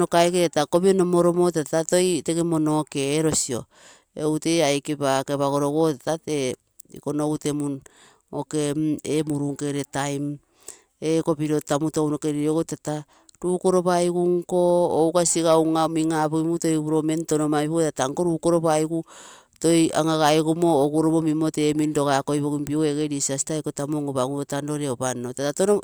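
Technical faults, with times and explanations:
No technical faults found in this speech recording.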